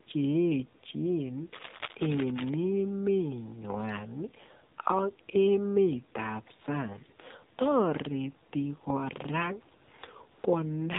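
Throughout, the speech carries AMR narrowband mobile codec damage. The encoder keeps only a vocal-tract model excited by a few pulses, and the result is plainly buzzy and synthetic, which fits AMR-NB's 7.4 kbps mode. Because the signal was sampled at 8 kHz, nothing above 4 kHz survives. A spectrogram shows a hard ceiling at 4 kHz with empty space above it, and harmonics below it look smeared and coarse, refreshed in 20 ms steps.

From 1.53 to 2.51 s, cable scratch noise sits over the speech. It sounds like rough scraping and rustling, about 10 dB below the speech. The likely cause is a worn cable, connector or control being moved, so that contact resistance flickers rapidly. On the waveform this appears as dense, irregular spiky bursts riding on the signal. The spectrogram shows ragged broadband vertical streaks across the whole band up to the 4 kHz limit for just under a second.

AMR comfort noise appears twice near the end: 40 ms at 9.84 to 9.88 s and 120 ms at 10.32 to 10.44 s. 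Each time, the phone judged the talker silent and stopped sending speech frames, and the receiver substituted smooth synthetic noise built from a coarse level and spectrum estimate. The real background briefly switches to an even hiss. On a spectrogram these spans are flat, featureless blocks with abrupt edges, and the waveform shows a steady low-level band.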